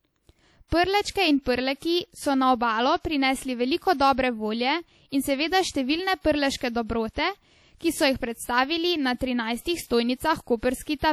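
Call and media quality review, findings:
Ringing, washy speech with hiss that breathes with the level, throughout. Likely WMA compression at a low bitrate, around 48 kbps. Long transform blocks smear quantisation noise; weak spectral lines get dropped.

Pre-echo at 5.71 to 5.75 s. Short hiss precedes a sharp attack, smearing it by about 35 ms. Transform codec spreads block noise into the quiet lead-in.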